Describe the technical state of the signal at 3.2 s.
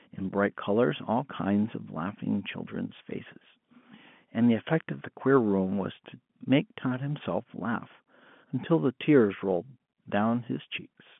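At 3.2 s the signal is intact, with no fault present, just ordinary G.711 telephone coding that confines the speech to the line band of roughly 150 Hz to 3.4 kHz with nothing above about 3.7 kHz.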